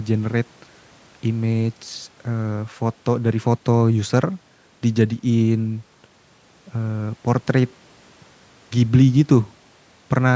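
Nothing stood out on listening to this speech clip.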